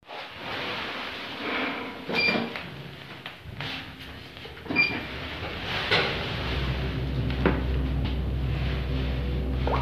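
A recording of sounds, with compressed frames skipped at 0.51, 2.72, 3.93 and 8.04 s. At each point the audio jumps ahead, by about two frames at the first two and one at the last two. This fits a frame length near 23 ms.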